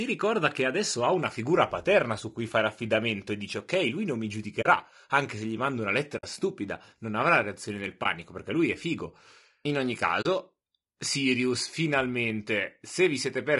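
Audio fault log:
throughout: low-delay AAC compression. The speech sounds rough and grainy, with noise filling the gaps between pitch harmonics and a thin, somewhat synthetic top band. This is likely AAC-ELD coding, whose short frames resolve pitch poorly, and the damage fits a bitrate near 32 kbps.
4.61–4.66 s, 6.17–6.24 s, 8.03–8.06 s, 10.21–10.26 s: AAC frame loss with muting. The speech briefly drops into soft-edged holes lasting 40, 60, 20 and 40 ms. Missing frames were decoded as silence, and the overlapping windows fade the sound out and back in around each gap.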